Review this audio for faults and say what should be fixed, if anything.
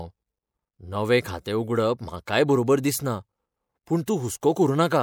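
Pre-echo at 2.26 s, 3.86 s and 4.06 s: a short hiss arrives just before three sharp speech attacks, about 17, 13 and 18 ms ahead of each. The codec spreads quantisation noise evenly across a transform block, so when an onset lands late in the block, noise sized for the loud attack leaks into the quiet gap before it, leaving the transient softened and smeared. Preventing it means encoding with transient detection and block switching enabled, so short windows are used around sharp onsets.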